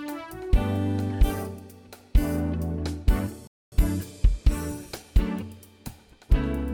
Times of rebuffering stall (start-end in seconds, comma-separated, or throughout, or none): 3.47-3.72